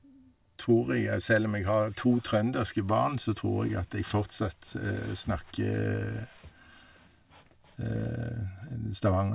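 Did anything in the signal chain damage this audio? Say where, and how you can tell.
No, nothing in the chain left an audible mark on this speech. I can't hear a problem at any stage from capture through to playback.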